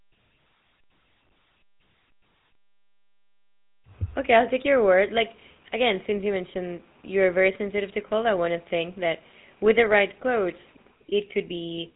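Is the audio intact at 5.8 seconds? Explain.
No. The whole clip, 5.8 s included, has passed through the GSM full-rate codec, whose excitation is rebuilt from sparse regular pulses at a rate that fits about 13 kbps. Nothing above 3.8 kHz survives, and the speech has a plainly audible buzzy, gravelly roughness.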